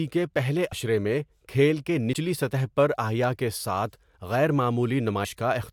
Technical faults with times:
2.13 dropped buffer (overrun)

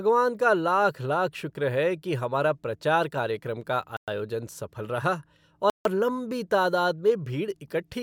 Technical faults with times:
3.97-4.08 Bluetooth stall
5.70-5.85 Bluetooth stall

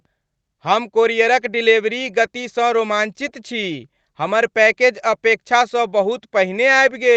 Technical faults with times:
none

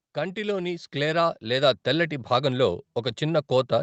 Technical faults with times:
0.14-3.83 automatic gain rising

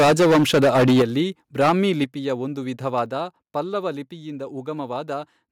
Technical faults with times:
0.00-1.05 microphone overload
1.02 microphone volume stepped down
1.61-1.73 microphone overload
2.04 microphone volume stepped down
2.98-3.00 microphone overload
3.06 microphone volume stepped down

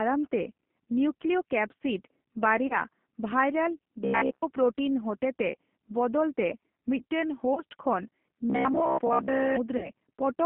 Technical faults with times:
0.00-10.45 G.729 codec
2.67-2.78 VoIP packet loss concealed by the speech codec
4.00-4.42 robotic sound from repeated short buffers
7.54-7.62 VoIP packet loss concealed by the speech codec
8.50-9.56 robotic sound from repeated short buffers
9.77-9.90 VoIP packet loss concealed by the speech codec

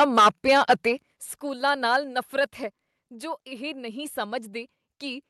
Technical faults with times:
0.00-0.89 microphone overload
1.02 microphone volume stepped down
2.04 microphone volume stepped down

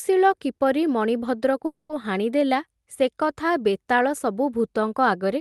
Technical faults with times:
1.65-1.91 call audio freeze

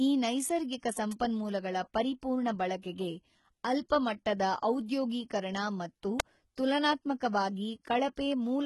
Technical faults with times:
0.00-8.66 HE-AAC compression
1.11 electrical switching spike
2.82 pre-echo
3.89 pre-echo
6.20 electrical switching spike
8.16 pre-echo

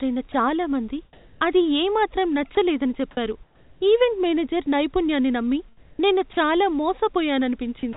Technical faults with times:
0.32-0.34 sound dropped by the voice detector
1.13-1.41 comfort noise in place of the background
2.55-2.57 sound dropped by the voice detector
3.43-3.81 comfort noise in place of the background
5.77-6.37 comfort noise in place of the background
6.33-6.37 sound dropped by the voice detector
7.93-7.96 sound dropped by the voice detector

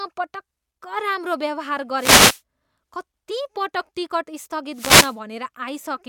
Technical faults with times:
1.95-2.41 wireless microphone noise hit
3.30 compressed frames skipped
4.72-5.18 wireless microphone noise hit
4.99-5.02 compressed frames skipped

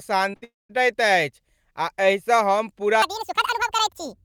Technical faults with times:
0.31-0.35 short concealed packet loss
0.35-0.44 burst of packet loss
0.44-0.71 long network dropout
3.02-4.24 section at the wrong speed

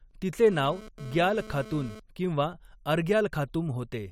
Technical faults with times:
0.47-2.00 GSM phone buzz

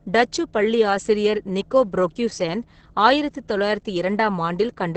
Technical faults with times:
0.00-4.96 Opus voice compression

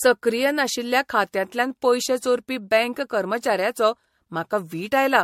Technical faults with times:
0.00-5.23 generation loss

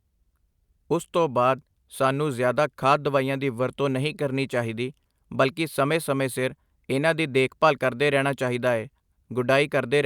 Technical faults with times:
none

